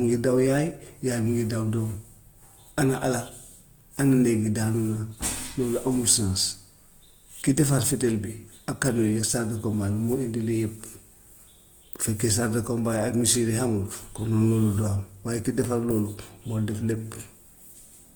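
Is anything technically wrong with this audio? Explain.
Yes. Throughout, the speech has a rough, grainy texture, likely from Opus compression in its music mode at a low bitrate: band energy is preserved but detail is noise-filled, despite full bandwidth to 20.2 kHz.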